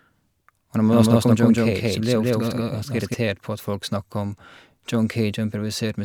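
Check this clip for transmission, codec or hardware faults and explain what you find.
One fault is present: a doubled audio track from 0.92 to 3.14 s. A second full-band copy of the speech runs about a fifth of a second behind, at roughly equal level, most likely from a slower capture path. Unlike echo, it has no decay or room colour and cuts in and out abruptly.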